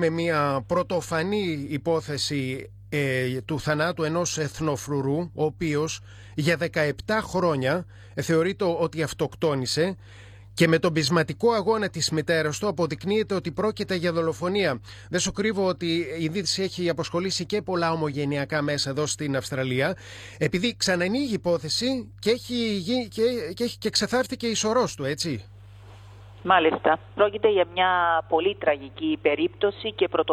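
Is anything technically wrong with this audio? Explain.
Yes. A steady low tone runs underneath the sound for the whole clip, a dull, constant drone sitting at 50 Hz with some low harmonics above it. It stays roughly 20 dB below the wanted signal. This is mains hum: the 50 Hz power line has leaked into the signal path, typically through a ground loop between connected equipment or magnetic pickup from a nearby transformer.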